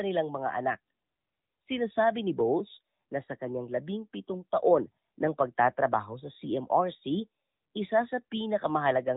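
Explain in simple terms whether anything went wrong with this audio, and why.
Yes, the whole recording has passed through an AMR narrowband mobile codec, the speech coding used on older phone networks. Nothing above about 3.8 kHz survives, so the speech sounds thin and muffled, and the compression adds a plainly audible buzzy, synthetic edge throughout.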